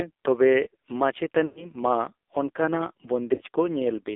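A speech recording that has passed through the AMR narrowband mobile codec, with heavy codec damage throughout. The voice is confined to a telephone band of about 300 Hz to 3.6 kHz, and the thin, buzzy, synthetic texture is consistent with a low rate around 5.9 kbps, where few pulses per subframe drive the vocal-tract model. A spectrogram would show a hard ceiling near 3.6 kHz, nothing below 300 Hz, and smeared, blocky harmonics. Lost AMR speech frames occur twice. From 1.46 to 1.73 s about 100 ms of frames are missing, which fits five 20 ms frames failing their checks. The decoder stretches the last good pitch and spectral shape while the gain drops, so the sound drags and fades toward silence before the voice returns weak or rough. From 3.34 to 3.40 s a shorter 40 ms loss gives a brief dip. On the waveform both events appear as decaying, repetitive stretches, and on the spectrogram as frozen, fading harmonic bands.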